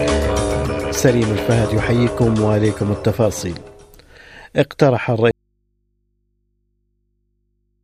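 The signal path likely lost its source at 5.31 s while the stages after the break stayed live, producing an audio dropout to a faint residue. The sound cuts off abruptly, not as a pause or fade, and from there to the end of the clip only a low mains hum from the open input remains, sitting roughly 50 dB below the level of the sound before the break.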